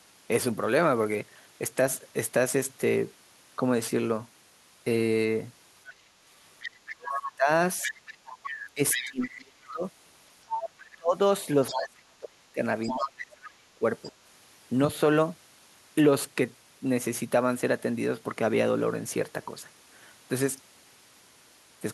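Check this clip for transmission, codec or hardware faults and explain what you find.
Two echo-related faults are present, overlapping in the middle of this speech clip.

Other side's voice leaking through: a second voice runs from 5.87 to 11.81 s at about 10 dB below the talker, returns at 12.83 to 13.08 s, and appears as a faint scrap, about 25 dB down, at 14.04 to 14.12 s. This is likely loudspeaker echo left behind by the canceller. Unlike mixing crosstalk, it follows the far end's turns.

Speech suppressed in double talk: from 6.96 to 9.84 s and from 10.96 to 13.84 s, the talker's own voice dips in pieces by as much as about 35 dB. The cuts add up to roughly one and a half seconds in each stretch. The likely cause is the echo canceller turning down both voices while the two sides spoke at once. Unlike a network dropout, the gaps line up with the other voice.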